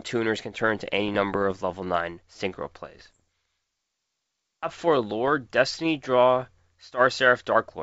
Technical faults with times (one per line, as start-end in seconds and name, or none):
1.08-1.61 bit errors on an ADPCM link
2.97-3.20 bit errors on an ADPCM link
5.28-5.31 bit errors on an ADPCM link